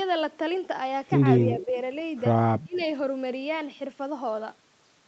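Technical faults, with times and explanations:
1.53–1.74 s and 2.64–2.81 s, speech suppressed in double talk: the level dips while the far side talks, gently at first (about 5 dB over roughly 200 ms), then much harder (about 20 dB over about 150 ms). Likely the echo canceller couldn't separate the talker from the loudspeaker echo and ducked both.
1.6–1.65 s and 2.74–2.85 s, echo leak: faint scraps of a copy of the speech arrive about 240 ms late, about 20 dB and then about 30 dB under the main speech. The far end's canceller likely missed some loudspeaker pickup and sent it back.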